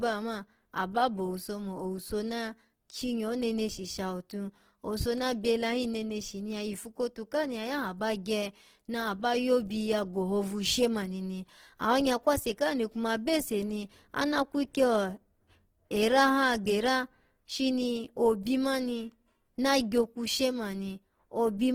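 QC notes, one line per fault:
Throughout: Opus compression. The speech sounds plainly rough, grainy and noisy in its tonal parts, with little swirl, while the bandwidth still reaches 20.2 kHz. The likely cause is Opus music mode starved of bits, filling bands with folded or noise energy, consistent with about 16 kbps.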